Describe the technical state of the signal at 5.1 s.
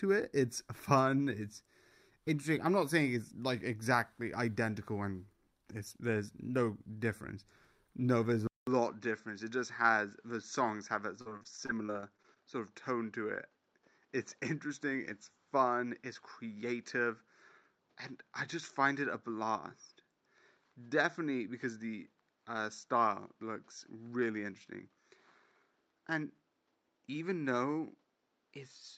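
At 5.1 s the signal is intact, with no audible technical fault at that moment.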